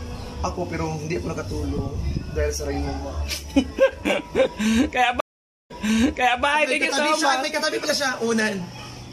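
At 5.20 s the audio drops out for about half a second, then resumes at 6.44 s by replaying material heard just before the gap, stepping back 0.74 s so a short stretch is heard twice. This is a stream reconnect: the connection broke, the player fell silent, then reconnected and started a fresh decoder mid-stream. Because the server resent a burst from slightly earlier in the stream, playback restarted behind the point where it cut off.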